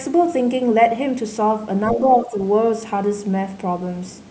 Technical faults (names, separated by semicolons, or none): other side's voice leaking through; speech suppressed in double talk